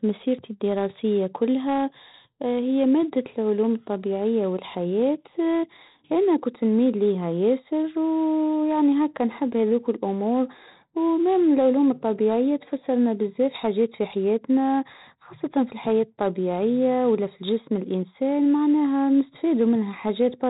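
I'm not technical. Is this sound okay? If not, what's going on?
No. From start to finish the speech sounds gritty and hissy, with harsh edges on sudden loud sounds, and it's dull because nothing above 3.8 kHz survives. That's heavy 4-bit ADPCM compression, which stores each sample as a rough small step.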